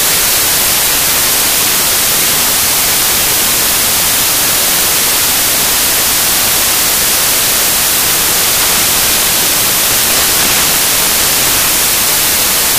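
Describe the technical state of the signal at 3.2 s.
Loud, harsh broadband noise at 3.2 s, as throughout the clip: samples built from the wrong bytes, so the rapidly changing low-order bits swamp each value.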